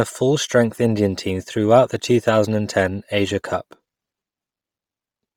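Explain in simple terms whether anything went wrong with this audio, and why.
The speech has a breathy, grainy edge from start to finish, with hissy noise where the crisp high sounds should be. This is likely Bluetooth LC3 compression, which squeezes the sound hard in 10 ms chunks and replaces much of the treble with filler noise.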